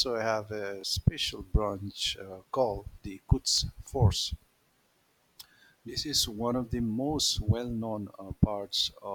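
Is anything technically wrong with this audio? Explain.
Yes. There are two repeated buffers in this speech, at 0.81 s, after "have a", and at 3.55 s, after "branch uh called the". Each time, new audio arrived late. The device replayed its last 23 ms chunk once, which fits a 1024-sample buffer. The result is a brief stutter with a hard join.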